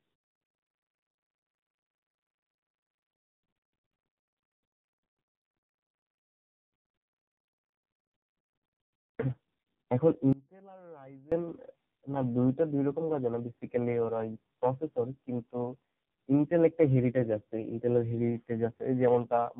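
Speech recorded over a chain with tandem speech coding: the sound is rough, muffled and warbly, with nothing above 3.8 kHz. The character points to a CVSD link, then G.711 A-law, then AMR-NB at around 5.9 kbit/s, each coder re-encoding the previous one's errors. From 10.33 to 11.32 s, an audio dropout to a faint residue abruptly removes the speech for about 0.99 s. Only a faint trace remains, some 25 dB below normal level, likely from a brief loss of the signal while the downstream path stayed live.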